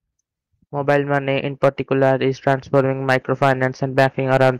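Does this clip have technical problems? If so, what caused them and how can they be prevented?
Yes. Hard clipping runs through the whole speech clip: the signal was driven about 8 dB past what the converter or gain stage could pass, so a small share of the peaks were sliced flat, adding high harmonics heard as crackle on louder syllables. Prevent it by lowering input gain or adding a limiter before conversion.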